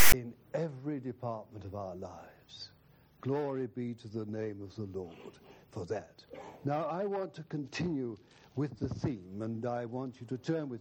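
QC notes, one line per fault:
0.00–0.13 s, file tags played as audio: a hard-edged, lopsided rasp then a dead gap, as tag text and its zero padding are read as samples.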